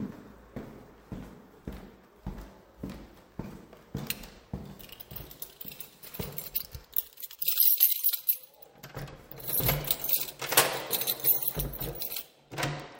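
No technical faults are audible.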